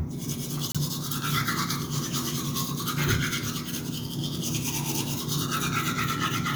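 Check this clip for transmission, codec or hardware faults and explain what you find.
One fault is present, a corrupt frame decoded, at 0.70 to 0.78 s. For about 70 ms the decoder played out a short run of damaged compressed frames, a few in a row, whose flipped bits were read as valid data. Misread gains and coefficient codes placed energy at frequencies unrelated to the surrounding sound. The result is a brief, fairly loud chirp-like burst of noise.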